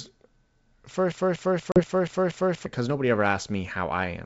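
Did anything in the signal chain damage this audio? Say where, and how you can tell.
Yes. From 1.12 to 2.66 s the audio shows a broken-record loop, most likely from a playback or buffer stage that stalled and kept re-sending the last fragment it held. A slice about 0.24 s long plays six times back to back with identical content each pass, and whatever should have sounded in that stretch is gone. The sound resumes normally with "nobody ever", which marks where fresh audio reaches the output again.

Inside that span, at 1.72 to 1.81 s, there is packet loss on an ADPCM call at the network stage. Roughly 40 ms of audio, about two packets' worth, drops out as a hard-edged silent gap. The G.722 wideband decoder's adaptive predictor and step size then no longer match the sender's, so the speech returns slightly distorted. It settles over the next few tens of milliseconds as the decoder re-tracks.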